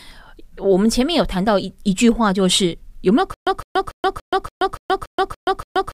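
Stutter with silent gaps begins at 3.34 s and continues to the end of the speech. A fragment of about 159 ms plays, then drops into about 128 ms of digital silence, and the same burst returns nine times on an even cycle of roughly 286 ms. This is likely a player or stream stall, with each retry replaying the last buffered fragment before running dry. Whatever speech should have followed is lost.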